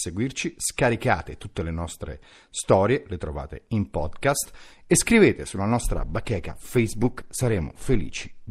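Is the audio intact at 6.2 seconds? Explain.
No, at 6.2 seconds you're inside a stretch where the adaptive stream dropped to a lower bitrate, running from 5.93 s to the end. The connection slowed, so playback switched abruptly, without a gap, to a leaner encode. Codec artefacts rise, which fits a fall to roughly 16 kbit/s Opus.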